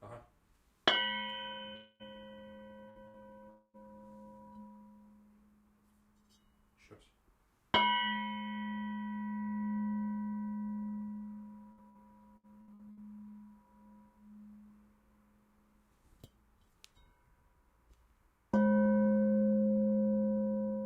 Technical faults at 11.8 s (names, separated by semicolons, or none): burst of packet loss